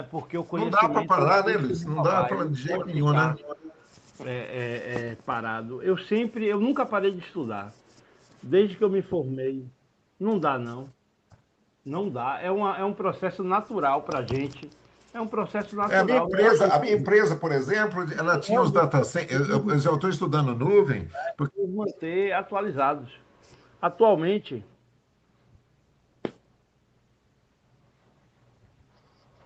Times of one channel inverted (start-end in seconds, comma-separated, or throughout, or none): none